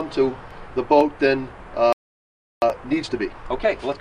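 At 1.93 s the sound cuts out in mid-flow. Silence holds for about 0.69 s, until 2.62 s. This is a playback stall. The likely cause is a player that ran out of data or had its output thread blocked.

From 2.62 s to the end comes time-compressed catch-up. The player clears its backlog by removing small slices and cross-fading the joins. The result runs about 1.15 times fast at normal pitch. It sounds rushed.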